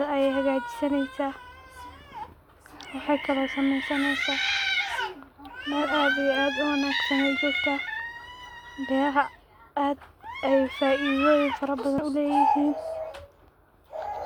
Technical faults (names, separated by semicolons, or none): damaged data in a compressed stream